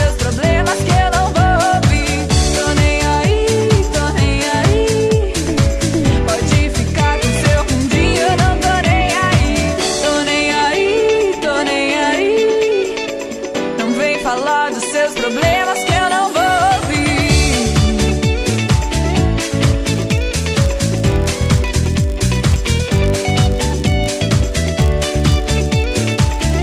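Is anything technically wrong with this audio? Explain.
Yes. From 19.86 s to the end, a filter restarted on every block loses its state at each block boundary, producing ticks that merge into a 50 Hz buzz tracking the signal's level.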